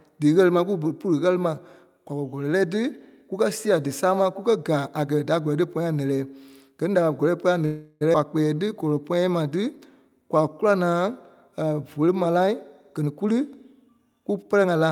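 Speech over a call link with jitter buffer trouble throughout the second half. At 7.65 to 8.03 s a call audio freeze appears, likely because packets were held up in transit and the jitter buffer ran dry. The receiver stretched the last sound into a fading buzz or hiss for 354 ms, then resumed where it left off, so a gap was inserted and nothing was lost. Just after, at 8.13 to 8.16 s, a skip ahead occurs: a stretch of roughly a third of a second was discarded while later audio was already queued, and the two sides are butted together almost directly, which also largely undoes the delay the freeze built up. Jitter buffer slow-down follows twice, at 8.54 to 9.66 s and 10.10 to 11.75 s. With the buffer running low or having just raised its target delay, the receiver repeated single pitch periods to build a reserve, adding 115 ms and 151 ms. The speech plays at about 90% and 91% speed at unchanged pitch, with drawn-out sounds. 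Jitter buffer speed-up then trims surplus delay. At 12.20 to 12.52 s short pitch-period pieces are cut at 150% speed, removing around 150 ms and sounding noticeably hurried. From 13.00 s to the end the pace runs at 111%, shedding roughly 200 ms, again with pitch unchanged.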